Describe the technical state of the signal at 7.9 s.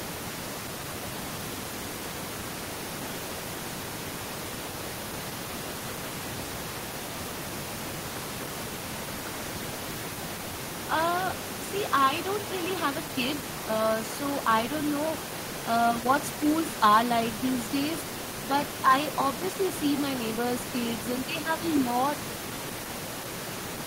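At 7.9 s the signal is intact, with only the room's own background noise sitting about 10 dB below the speech.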